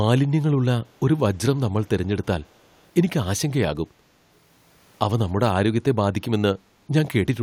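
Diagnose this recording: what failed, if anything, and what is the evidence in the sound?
From 2.42 to 2.83 s a faint, delayed copy of the speech trails the original by about 322 ms, sitting far below it in level. The likely cause is an echo leak in call processing, where a loudspeaker-side echo canceller let residue through. A single fixed-offset repeat separates it from room reverberation's smooth decay.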